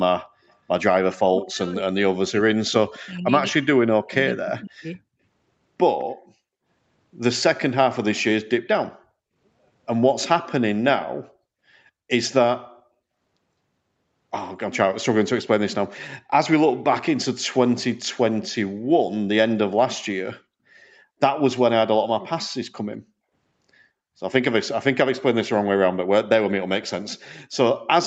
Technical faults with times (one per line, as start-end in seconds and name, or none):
0.48-0.55 echo leak
0.98-4.99 speech suppressed in double talk
4.55-4.61 echo leak
5.99-6.04 echo leak